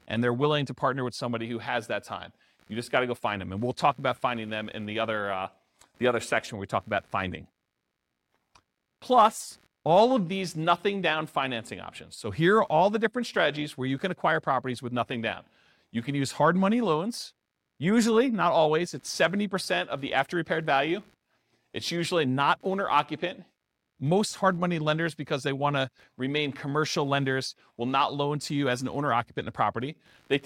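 Computer activity noise runs from start to finish beneath the speech: a faint buzzing and chirping that rises and falls with the computer's workload rather than with the talking. Load swings in the processor or graphics circuitry disturb the ground shared with the audio path, leaving pulses at around 70 per second, roughly 40 dB below the speech. A spectrogram shows them as low-level vertical striations and harmonic combs that persist through pauses; the waveform shows a fine ripple in gaps.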